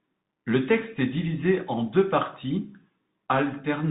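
Bluetooth CVSD headset codec damage runs through the whole clip, from start to finish. The speech has been squeezed through the narrowband headset link, which encodes each sample as a single up-or-down bit with an adapting step, consistent with a 64 kbps stream. Nothing above 4 kHz survives, so the voice sounds boxed in and dull. Fast, loud high sounds outrun the step, s sounds turn scratchy, and a granular hiss sits plainly audible beneath the speech.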